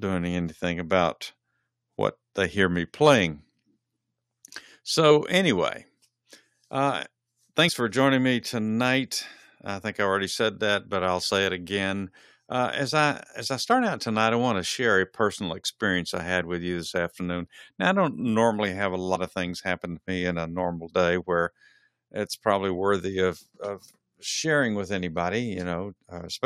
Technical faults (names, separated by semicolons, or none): compressed frames skipped